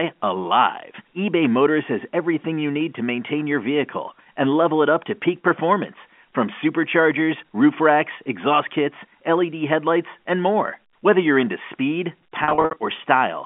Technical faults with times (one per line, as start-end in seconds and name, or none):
12.44-12.76 packet loss with pitch repetition